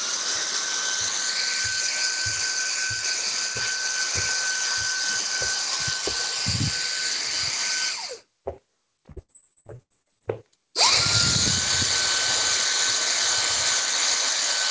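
From 9.12 s to 10.23 s the sound breaks up with repeated packet loss (robotic sound). Eleven short holes open in quick succession, the longest about 74 ms, and each is bridged by stretching out the sound just before it, so roughly a third of that span is synthetic fill. The result is a choppy stutter. A single dropout would leave one gap; here the gaps recur closely, and the repeated patching produces the robotic buzz. The band stops at 8 kHz throughout, which fits a wideband call codec such as G.722.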